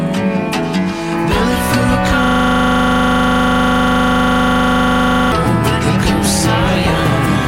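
A system hang loop runs from 2.24 to 5.32 s. A single 40 ms slice of audio repeats exactly, some 77 times, giving a rigid 25 Hz buzzing rattle. The system froze while the sound hardware kept replaying its ring buffer, which fits a 40 ms buffer.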